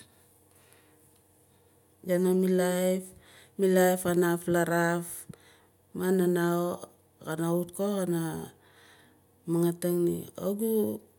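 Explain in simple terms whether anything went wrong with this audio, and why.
Nothing went wrong here.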